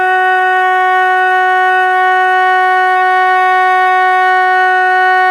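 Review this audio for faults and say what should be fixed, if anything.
Nothing needs to be fixed, as no faults can be heard in this music.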